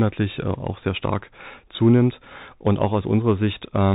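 Throughout, the speech carries Bluetooth CVSD headset codec damage: nothing above 4 kHz, scratchy s sounds, and granular hiss, consistent with a 64 kbps one-bit delta link.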